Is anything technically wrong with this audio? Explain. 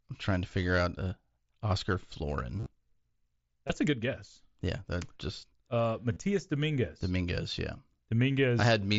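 Yes. There is concealed Bluetooth headset packet loss in three places, heard over wideband mSBC headset audio with a top near 8 kHz. The losses fall at 2.58 to 2.66 s, where about 60 ms of gaps are scattered across 75 ms with a longest run of 30 ms; at 3.67 to 3.70 s, just before "a good guess"; and at 6.13 to 6.16 s. At each spot the receiver fills the missing audio by repeating the closest-matching recent stretch of waveform, so you hear a brief steady buzz and a small warble as real sound resumes. On a waveform these look like short runs of repeating, evenly spaced cycles at full level. A spectrogram shows them as short flat horizontal striations.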